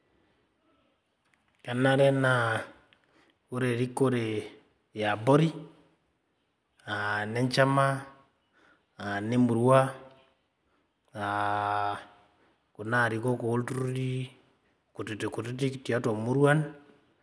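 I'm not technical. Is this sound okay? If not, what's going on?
Yes, no faults heard.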